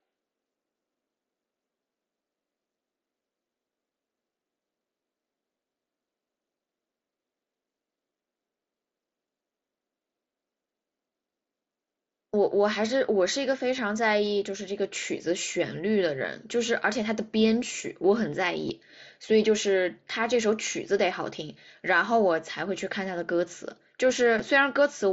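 Concealed Bluetooth headset packet loss hits at 13.77, 16.19, 18.69 and 24.39 s. Each dropout lasts about 7.5 ms, or 15 ms at 16.19 s, and gets patched with recycled waveform, so the single losses are barely audible.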